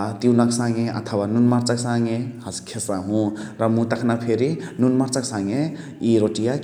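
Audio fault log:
No technical faults can be heard anywhere in this speech recording. There is nothing to log for it.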